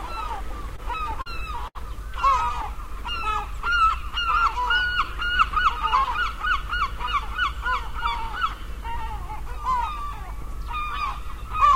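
From 0.63 to 1.28 s there are repeated stalls (stutter): packets arrived late, so the jitter buffer emptied five times and the receiver held the last sound through each wait, 84 ms in all, the longest 40 ms. Nothing is lost, but the sound drags and hiccups. A spectrogram shows short smeared, flattened bands where frames are repeated.

At 1.68 s a short stall from a late packet holds the sound for 72 ms until the packet arrives, giving a brief buzzy sustain or dip. The waveform shows a repeated, slightly sagging stretch before normal motion resumes.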